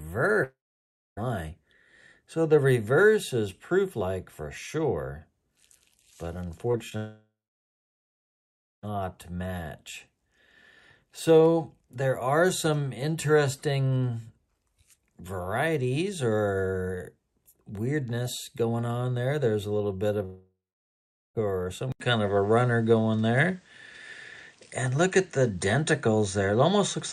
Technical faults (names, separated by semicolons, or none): long network dropout; short concealed packet loss; input switched to a poorer device